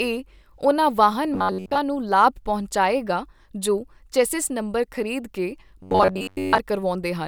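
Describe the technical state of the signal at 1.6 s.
At 1.6 s the speech has robotic sound from repeated short buffers. It runs from 1.34 s to 1.78 s, just after "ਉਨ੍ਹਾਂ ਵਾਹਨ". The voice becomes a rigid, metallic buzz near 93.8 Hz. It still loosely tracks the speech. The likely cause is audio arriving too late, with the playback filling gaps by looping a slice of about 10.7 ms. Most of the span is this repeated material, not fresh signal.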